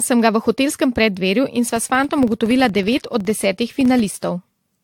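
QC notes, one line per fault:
Throughout: generation loss. The speech sounds swirly, hollow and smeared, with soft attacks, likely from about five rounds of AAC-LC re-encoding at something like 96 kbit/s.
1.77–4.33 s: filter restarted on every block. A level-following buzz at 21.5 Hz, each block kicking off from silence with a little transient, which fits 2048-sample blocks.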